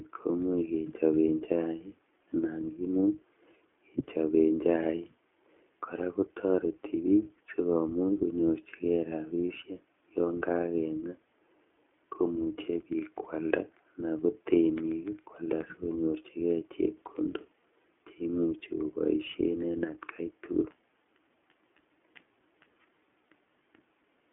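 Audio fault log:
Throughout, iLBC codec: the speech sits in a narrow telephone band of roughly 250 Hz to 3.4 kHz with nothing above 3.6 kHz, and has a plainly audible rough, synthetic edge. That fits a 15.2 kbps setting coding each 20 ms frame independently, which sets it apart from plain band-limiting.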